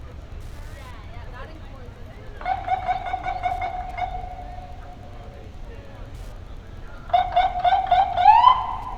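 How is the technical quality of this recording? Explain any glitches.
There's one glitch, and it runs the whole way through: Wi-Fi interference. A nearby Wi-Fi radio sends a beacon every 102.4 ms, and the audio circuit rectifies those bursts, so you get a faint, steady ticking about ten times a second, sitting well below the sound itself.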